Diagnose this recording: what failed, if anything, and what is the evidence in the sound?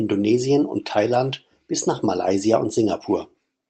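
Nothing failed: the speech shows the expected signature of a call path, with its top end stopping at 8 kHz in a way that fits Opus at around 24 kbps, and nothing in the sound points to a failure at any stage.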